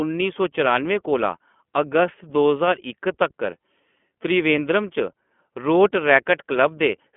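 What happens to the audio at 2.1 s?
At 2.1 s the speech carries iLBC codec damage, present across the whole clip. The line is confined to roughly 200 Hz to 3.4 kHz, and each 20 ms frame's excitation is coded independently, giving a plainly rough, synthetic texture that fits the 15.2 kbps mode.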